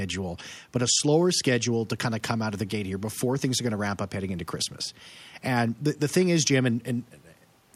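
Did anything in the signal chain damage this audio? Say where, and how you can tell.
No, nothing in the signal chain has audibly damaged this speech recording. No stage between capture and playback leaves any mark that can be heard.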